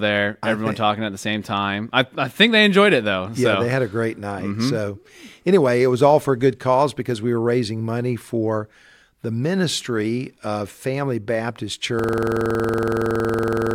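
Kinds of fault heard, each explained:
System hang loop: From 11.99 s to the end, one 46.44 ms slice of the speech repeats exactly, some 38 times. The system froze while the hardware kept replaying its buffer. The 21.5 Hz repeat sounds like a rapid, rattling stutter. The length fits a 2048-sample buffer.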